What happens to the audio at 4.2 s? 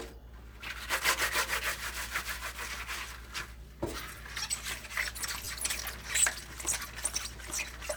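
At 4.16 s there is a repeated buffer. New audio did not reach the output in time. The device played its last chunk of sound again, so one very short piece is heard twice. The repeat length fits a 10 ms buffer. The joins are hard, and the segment is so brief that it comes across as a small click rather than a stutter. Roughly ten milliseconds of the original audio is lost.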